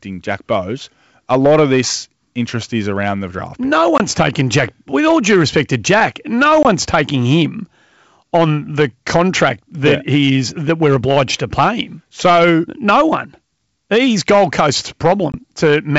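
In this speech clip, a stage was overdriven by about 8 dB, so hard clipping cuts a small share of peaks, roughly 2 percent of samples, flat throughout. The flattened tops add high harmonics, heard as crackle and grit on louder syllables. The G.722 wideband coding itself, consistent with its full 64 kbit/s mode, adds little audible damage. Packet loss on an ADPCM call strikes at 3.98 to 4.07 s, 6.63 to 6.67 s (just before "taking him") and 15.32 to 15.38 s. Each time, about two packets covering 20 ms of audio were lost and replaced by silence, leaving a hard-edged gap. The decoder's predictor and step size then fall out of step with the sender's, so the sound resumes with a click or distortion before settling.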